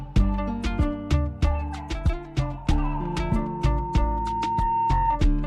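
A single pure tone near 915 Hz appears at 2.57 s, swelling over roughly two seconds until it sits about as loud as the rest of the audio, and holds until 5.21 s. This is loudspeaker feedback squeal: a microphone is hearing the loudspeaker it drives, and at 915 Hz the gain around that loop exceeds one, so the tone keeps reinforcing itself until something limits it or the loop is broken.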